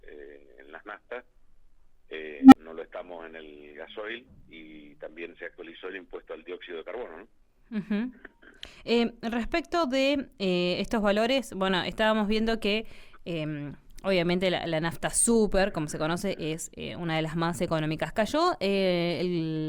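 At 2.40 s a low tone of roughly 300 Hz swells over about 122 ms into a harsh clipped squeal, then the sound drops out for about 35 ms, ending at 2.55 s. This is an unstable filter: a recursive stage whose feedback grew without bound until overflow silenced it.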